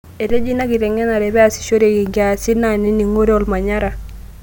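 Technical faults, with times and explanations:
No technical faults can be heard anywhere in the recording; the signal holds steady and intact at every point.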